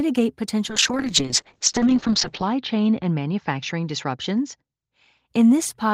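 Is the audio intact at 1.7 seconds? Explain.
No, at 1.7 seconds you're inside a call bitrate drop that runs from about 0.69 s to 5.33 s. The connection's bandwidth estimate fell, so the encoder was told to spend far fewer bits and coded the speech much more coarsely. Its sound, a rough, watery texture with the top end cut off at 8 kHz, fits a fall from around 32 kbps to 8 kbps. It sits at its worst for about 1.7 seconds before recovering.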